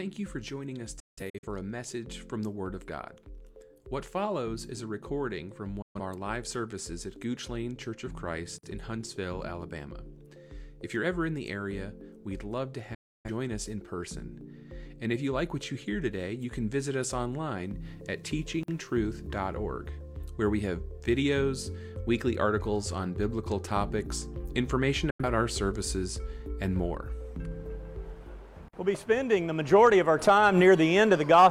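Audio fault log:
0.995–1.47 s, 5.82–6.00 s, 12.94–13.30 s, 25.10–25.24 s: digital broadcast dropout. The sound fades out within about 8 ms when frames fail. Audio sent during each mute is lost. The first event is several holes over about 0.43 s.
8.58 s, 18.63 s, 28.68 s: gap between chunks. A 50 ms silence falls at each join between 10-second chunks, interrupting the sound without losing any.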